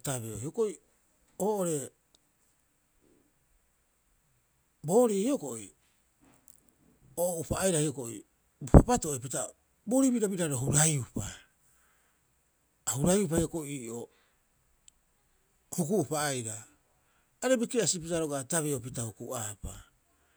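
No technical faults can be heard anywhere in the speech.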